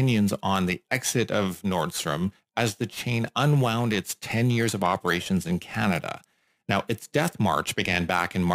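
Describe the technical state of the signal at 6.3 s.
Periodic clock jitter spans the whole clip, 6.3 s included. A clock wobble near 3 kHz adds metallic-sounding sidebands, visible on a spectrogram as copies offset by that spacing.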